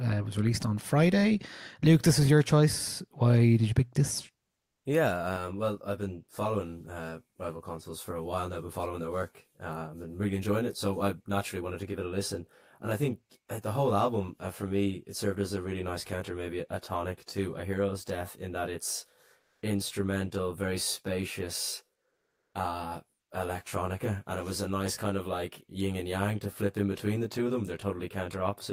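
A speech clip with two kinds of fault. The first is comfort noise in place of the background. It occurs three times: at 4.63 to 4.81 s, just after "did you pick this"; at 19.39 to 19.57 s; and at 22.15 to 22.51 s. The first two gaps last 180 ms and the third 360 ms. In each, the natural background gives way to a flat, featureless hiss. It drops about 10 dB in the first gap and only about 1 to 2 dB in the others. The likely cause is discontinuous transmission, with the receiver synthesising noise during pauses. The second fault is channel delay with comb filtering. It runs from 5.36 s to the end. One channel lags the other by about 20 ms, and the mono sum cancels at evenly spaced frequencies, beginning around 30 Hz. The sound turns rough and slightly doubled.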